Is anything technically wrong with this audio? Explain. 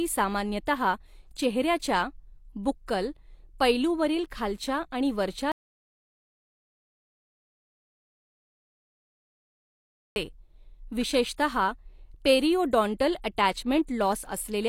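Yes. From 5.52 to 10.16 s, just after "पैलूवरील खालच्या आणि वरच्या", there is an audio dropout to silence lasting 4.64 s, likely from the input being lost while silence was still written. Unlike a fade or gate, the cut is abrupt and leaves no room tone.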